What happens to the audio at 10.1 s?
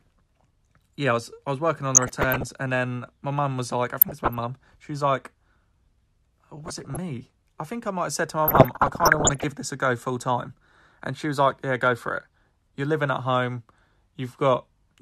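Nothing goes wrong at 10.1 s: the speech there plays through intact, with no dropout, click, distortion or other audible fault.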